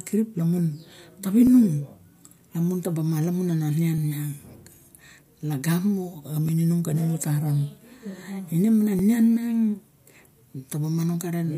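At 1.47, 3.98, 6.49 and 8.99 s the speech gives a click, spaced almost exactly 2.5 s apart. These are overlapping chunks: each 2.5 s block begins about 7 ms before the previous one ends, so that sliver plays twice at every join. Unlike a dropout, nothing goes missing and there's no silent gap. The brief doubling and its strict regular spacing set it apart from random clicks.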